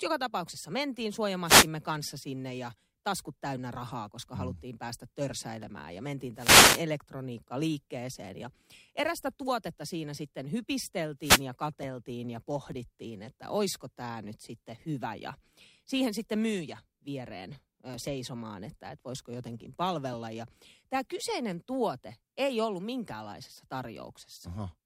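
Wireless microphone noise hits at 1.45 to 1.68 s, 6.34 to 6.86 s and 11.2 to 11.45 s: the FM radio signal fades as reflected paths cancel, so receiver noise rises into a brief swish of static over the speech, the longest lasting about half a second.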